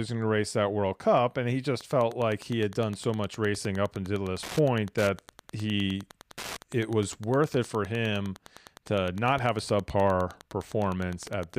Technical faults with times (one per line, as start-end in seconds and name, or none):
1.77-11.58 Wi-Fi interference